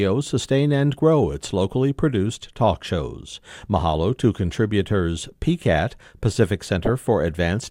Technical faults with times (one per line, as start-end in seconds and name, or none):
6.83-6.89 DAB burbling